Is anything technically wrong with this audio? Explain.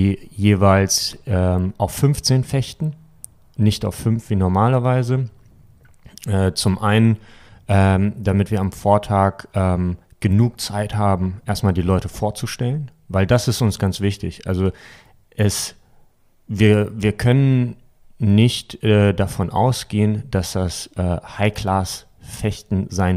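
No, nothing is technically wrong with this speech recording. Listening carefully, I hear no technical fault anywhere in it.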